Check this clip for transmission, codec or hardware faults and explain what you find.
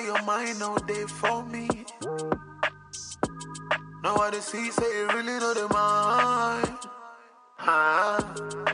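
No transmission, codec or hardware faults.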